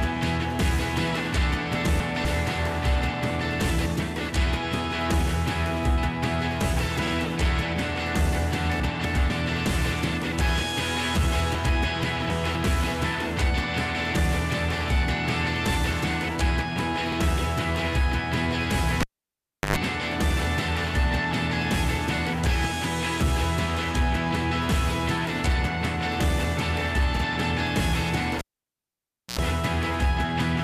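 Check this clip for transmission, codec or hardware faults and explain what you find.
Three kinds of fault show up: chunks out of order, overlapping chunks, and two cable pulls.

Chunks out of order occur at 1.75–2.25 s, 8.8–9.3 s and 11.55–12.55 s. Blocks of 250 ms play late, by one chunk in the first two and by three in the last, so the sound jumbles briefly. On a waveform, hard discontinuities mark each misplaced block boundary.

Overlapping chunks appear at 7.07 s, 17.12 s and 27.17 s, every 10 s. Each new chunk starts 50 ms before the previous one ends, so that slice repeats as a quick stutter. A spectrogram shows a short duplicated pattern at each join.

A cable was pulled and plugged in twice. At 19.01–19.76 s there is a pop, about 0.71 s of near silence, roughly 0.1 s of 50 Hz mains buzz, then another pop. At 28.39–29.39 s the gap is about 0.96 s with 60 Hz buzz. Spectrograms show a blank band bracketed by broadband spikes, with low harmonic lines during the buzz.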